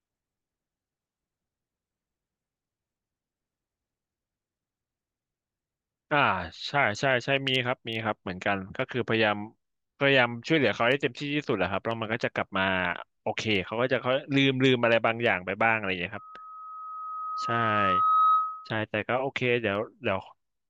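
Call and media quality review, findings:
Loudspeaker feedback squeal in the speech, 16.17 to 18.83 s. A single 1.3 kHz tone swells over about two seconds and ends a few dB louder than the speech. Probable component: an open mic picking up its own loudspeaker, with loop gain above unity at 1.3 kHz so that tone keeps reinforcing itself. Spectrogram: one narrow horizontal line at 1.3 kHz, brightening. Waveform: the envelope rises into a dense, steady sinusoid over the speech.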